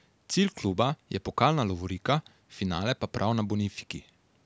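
Nothing goes wrong in this bit of speech; it just has that typical call-microphone sound, with the lowest bass trimmed away and nothing above 8 kHz, which is exactly how that processing is meant to behave.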